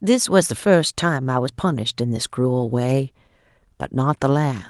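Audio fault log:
The speech signal arrives intact over the WebRTC call path, with the top of the spectrum ending near 12 kHz and the usual coding texture that fits Opus at around 32 kbps, and nothing disrupts the audio at any point.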